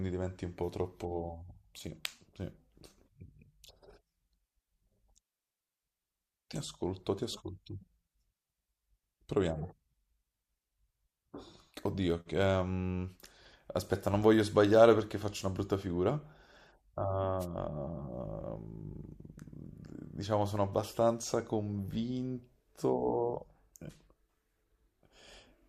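At 17.39 to 17.46 s there's a wireless microphone noise hit: the FM radio link briefly fades, and receiver noise surges up as a quick swish of static over the speech.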